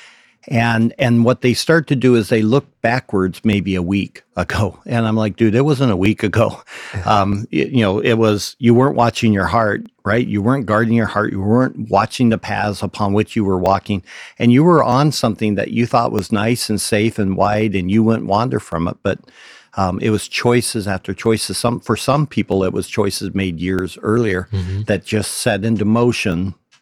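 Two devices in the chain are likely running on separate clocks that disagree by roughly a tenth of a percent, producing clock drift buffer slips. The buffer between them drifts until a small block of samples, on the order of a few dozen, is dropped or repeated. From 0.99 s to 26.32 s the speech carries a regular click about every 1.27 s, some twenty in all, each a brief discontinuity in the waveform.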